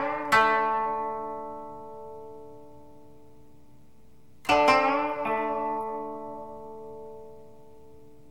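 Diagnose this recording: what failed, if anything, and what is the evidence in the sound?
Nothing failed in this recording, and the sound gives no evidence of a fault at any stage.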